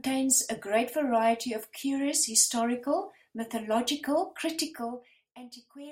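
Right after "of curious historical mythological", from 4.6 to 5.4 s, there's zipper noise: the level drops by around 20 dB in 1 dB jumps instead of a smooth ramp, about thirty a second, so each jump ticks and you hear a little zipping under the speech.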